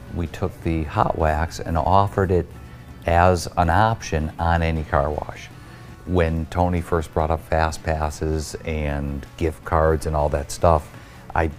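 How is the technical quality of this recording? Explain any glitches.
No glitches or technical faults can be heard here.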